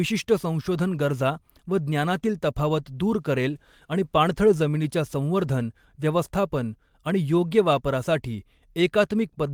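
No technical faults can be heard anywhere in the speech; the signal stays continuous and steady throughout.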